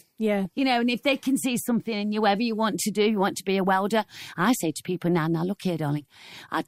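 At 0.45 s, DAB burbling: weak-reception bit errors corrupt the audio data, putting short blips of noise into single sub-bands, unlike a dropout, where the sound simply vanishes.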